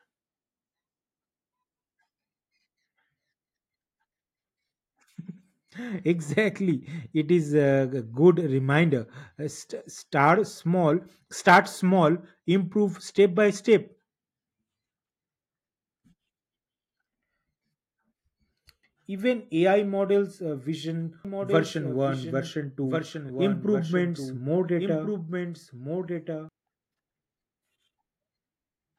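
From 21.25 s to 26.49 s the speech has a doubled audio track: a second full-band copy runs about one and a half seconds behind, only somewhat quieter, roughly 5 dB down. The likely cause is the signal being captured again through a slower path, or an edit leaving two copies out of step. Unlike an echo or reverb, the copy doesn't decay, carries no room colour, and starts and stops abruptly.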